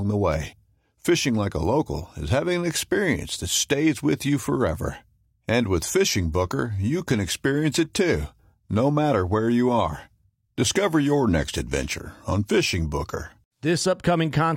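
From 6.21 to 12.21 s the speech drops to an adaptive stream at a lower bitrate. The treble turns thin and synthetic, nothing above 16.3 kHz, with more smearing, which fits a switch to HE-AAC around 32 kbit/s. The change is abrupt, with no gap.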